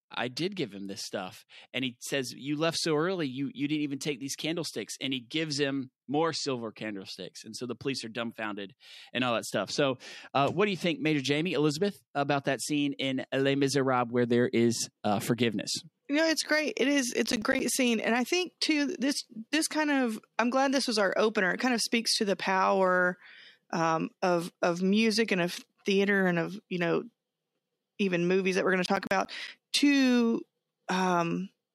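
Processor overload crackle hits this speech clip at 17.26 to 17.6 s, just before "scene and I think", and again at 28.86 to 29.48 s, after "that we're going to". Runs of tiny hard-edged silent gaps, each around 10 ms, point to a processor repeatedly missing its buffer deadlines under load.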